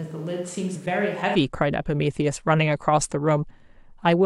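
A switch to a distant microphone is under way from the start until 1.34 s, when close, fuller sound returns abruptly. Before that the speech is hollow, roomy and thin in the bass, around 10 dB quieter, over faint room noise. The close microphone's feed was likely missing.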